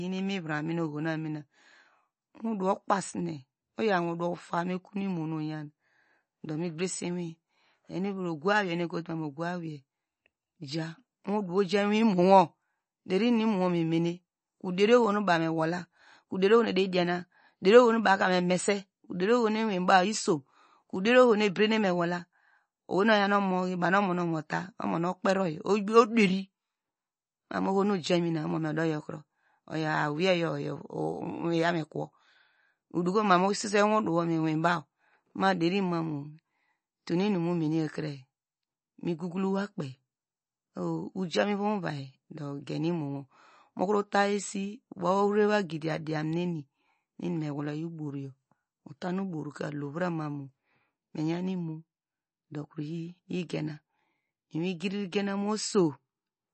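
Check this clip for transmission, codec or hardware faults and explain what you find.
One codec fault is present, and it runs through the whole clip. The speech carries plainly audible MP3 compression damage, likely from encoding at a low bitrate, which fits something near 32 kbps. With so few bits, the encoder drops all content above 8.4 kHz, leaving the sound dull, and discards weak frequency lines that then flicker in and out between frames. That flicker gives a watery, swirling texture, chirpy s sounds and smeared onsets.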